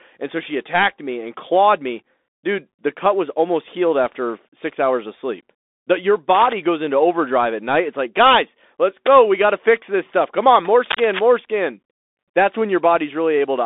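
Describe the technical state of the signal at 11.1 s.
At 11.1 s you're right in the middle of a burst of cable scratch noise, running from about 10.90 to 11.21 s, just after "on more". It's a dense, uneven crackle and rustle sitting nearly as loud as the speech itself for that third of a second. That's most likely a worn cable or connector being moved, with its contact resistance jumping around rapidly and throwing those noise bursts straight into the signal.

Underneath that, the whole clip runs through the Bluetooth CVSD headset codec, so this moment has it too. The line sits roughly between 250 Hz and 3.6 kHz, with nothing at all above 3.8 kHz, which gives it that boxed-in phone sound. The damage is plainly audible. CVSD codes one bit per sample at 64 kHz, just stepping up or down, and the adaptive step can't keep up with loud, bright sounds. So s sounds come out scratchy, and there's a granular hiss riding under the speech.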